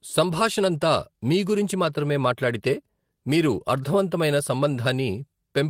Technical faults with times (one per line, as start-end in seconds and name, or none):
none